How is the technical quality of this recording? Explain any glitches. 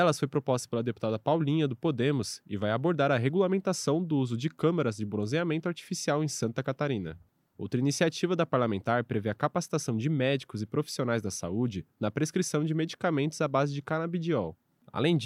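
Nothing glitchy turns up here; the recording holds steady all the way through, with no dropouts, clicks or other technical faults to point to.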